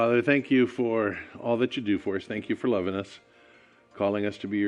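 No faults detected on listening; nothing to flag.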